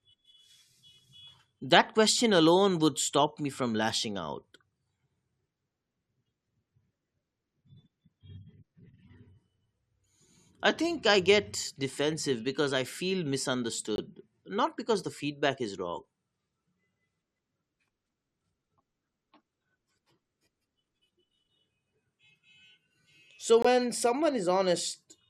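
Corrupt frame muted, twice in this speech: damaged compressed frames were rejected by the decoder and replaced with silence, leaving abrupt holes with timing intact. The first, 13.96 to 13.99 s just before "not because the feedback," fits one lost frame. The second, 23.62 to 23.66 s, suggests a short run of several.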